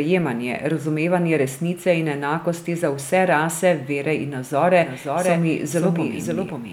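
From 4.83 s to the end, a doubled audio track appears: a second full-band copy of the speech cuts in abruptly, trailing about half a second behind and roughly 5 dB quieter, with no decay or room colour. A slower second capture path is the likely cause.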